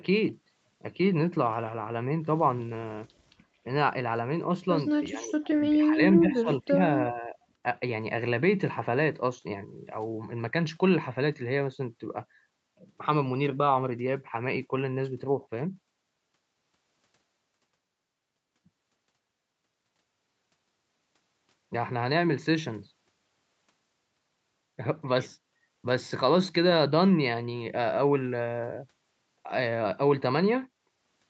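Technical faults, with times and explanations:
5.09–5.5 s, 5.69–6.0 s, 6.19–6.76 s and 7.13–7.35 s, speech suppressed in double talk: the echo canceller likely mistook overlapping talk for echo, ducking the speech by roughly 10 to 20 dB in short, choppy dips.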